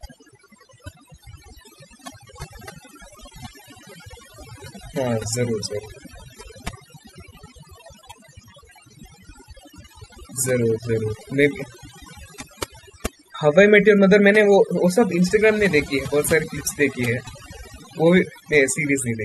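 A speech clip with overdone noise removal throughout. Aggressive noise reduction mutes bands near its noise estimate, leaving twinkling near-silence.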